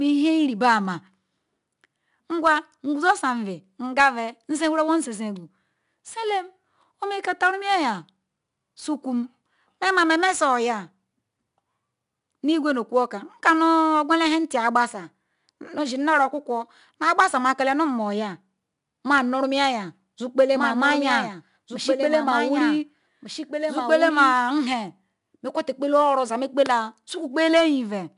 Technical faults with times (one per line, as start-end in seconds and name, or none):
0.00-28.17 4-bit ADPCM compression
20.55-24.33 doubled audio track